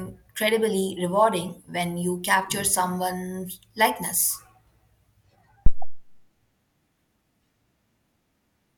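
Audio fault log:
5.66–6.08 s, phantom power thump: a deep thud hits the speech, peaking at about -3 dBFS and falling off with a 95 ms decay. Someone switched the supply on a live input, and that voltage step went straight through the coupling capacitors.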